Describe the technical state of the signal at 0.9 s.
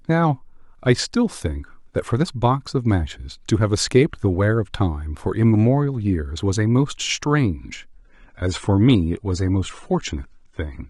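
At 0.9 s the signal is intact, with no audible technical fault at that moment.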